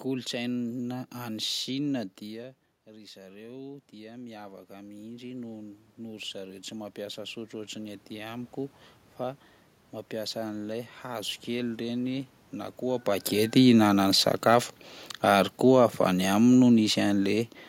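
From 2.2 s to 9.48 s the voice and the room noise behind it swell together over several seconds. This is automatic gain rising: the talker moved away around 2 s, the input fell by about 15 dB, and the gain control climbed about 14 dB to compensate.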